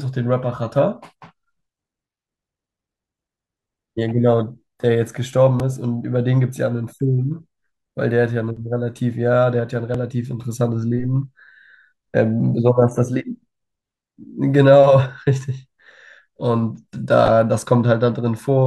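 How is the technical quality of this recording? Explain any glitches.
Three tiny glitches, all the same kind: a repeated buffer at 5.60 s, 8.57 s and 9.94 s. Each time the next chunk of audio didn't reach the playback device in time, so it replayed the last one. That was a 2.67 ms piece, which fits a 128-sample buffer. It repeats twice at 5.60 s and once at the other two. With such a short repeat and essentially nothing lost, each one comes across as a brief click in the speech rather than a stutter.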